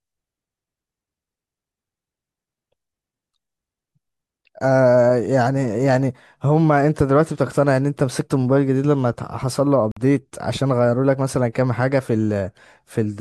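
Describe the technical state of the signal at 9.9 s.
A Bluetooth stall at 9.92 to 9.97 s drops the speech into 50 ms of silence, likely because interference delayed packets and the buffer ran empty.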